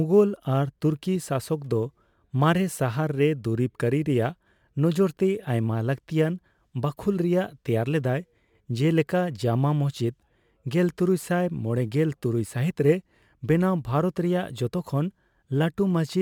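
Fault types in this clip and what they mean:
sample clock jitter: The converter's sampling instants wander by a few microseconds, so each sample lands slightly early or late and the error is largest where the waveform moves fastest. Throughout this speech it adds a fine, grainy hiss roughly 40 dB below the signal. The hiss is strongest on loud vowels and sibilants and drops away in the pauses. That tracking of the signal separates it from a steady background noise floor, which stays audible in silence.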